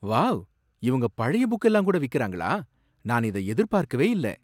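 A short recording of speech, with no technical fault to report. Nothing at any point calls for a time or a cause.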